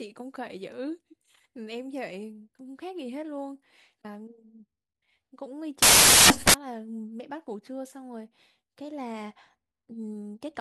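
From 5.82 to 6.54 s the reader assembles each sample from the wrong bytes, off by one byte or with the byte order swapped, so the rapidly changing low-order bits end up as the most significant part of every value. For those 0.7 seconds the speech is replaced by loud, harsh broadband noise, then the signal snaps back once the byte alignment is restored.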